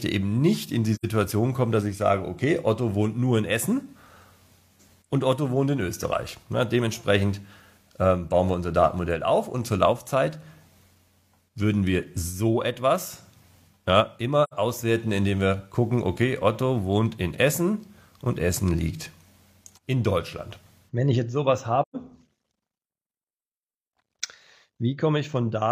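At 0.95 to 1.05 s, 14.43 to 14.54 s and 21.82 to 21.96 s the sound drops out in brief, soft-edged holes. This is AAC frame loss with muting: the decoder zeroed the missing spectrum, about 85 ms twice and 128 ms the last time, which fits two and then three lost frames. Overlapping windows fade each gap out and back in, so the waveform envelope tapers smoothly to silence and a spectrogram shows full-band vertical blank strips with soft edges.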